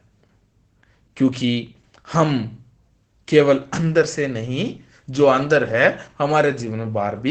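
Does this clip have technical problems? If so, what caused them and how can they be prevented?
Yes. Opus voice compression runs throughout the speech, with plainly audible damage. The sound is muffled, hoarse and slightly robotic, which fits Opus's SILK linear-prediction coder at a low bitrate near 12 kbps. At that rate it narrows the band and codes the excitation coarsely. To prevent it, encode at a higher Opus bitrate so the codec keeps full bandwidth and finer excitation detail.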